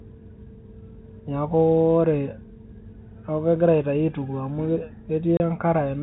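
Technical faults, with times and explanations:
5.37 to 5.40 s, packet loss filled with silence: the speech drops to dead silence for 30 ms, which fits one lost packet, with hard edges. Unlike concealment, nothing is smoothed over, and the gap is a hole in the steady 4 kHz G.711 telephone band.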